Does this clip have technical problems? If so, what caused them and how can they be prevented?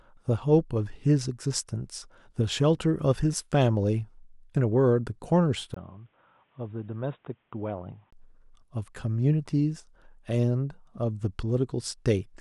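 Yes. From 5.74 to 8.13 s the input likely switched to a poorer device, such as a second microphone or a headset's call profile, before returning to the original. The speech turns dull and boxy, with nothing above 3.8 kHz, drops roughly 10 dB in level, and picks up new background noise around 40 dB below the voice. A brief gap of about 20 ms marks the switch. Lock the recording input to one device and disable automatic device switching.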